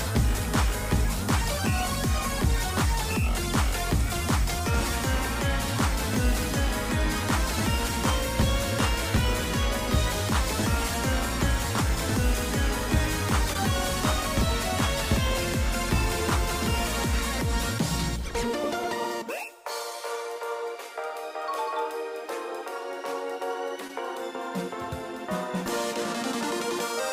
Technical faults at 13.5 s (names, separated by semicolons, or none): short concealed packet loss